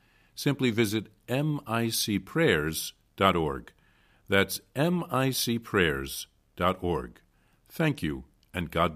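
No technical faults can be heard anywhere in this recording.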